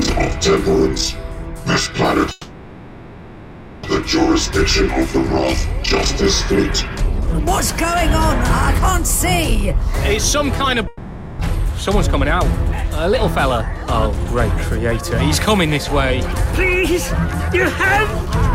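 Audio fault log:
2.31–3.85 s and 10.87–11.41 s, long network dropout: the real audio stops for about 1.5 s and then about 0.5 s, and concealment fills each gap instead. The sound smears into a buzz or hiss that decays, likely from lost packets. On a spectrogram, fine detail turns into blurred, fading bands. There is no true flatline before the audio resumes further on.
5.17, 8.74, 13.28 and 16.37 s, dropped buffer (overrun): each time a short piece vanishes, about 20 ms at 5.17 s and about 10 ms at the others. The two sides are spliced straight together, likely because the capture buffer was overwritten before it was read. This is heard as a jump in the sound. The waveform shows a sharp discontinuity, and the spectrogram shows a thin vertical broadband line.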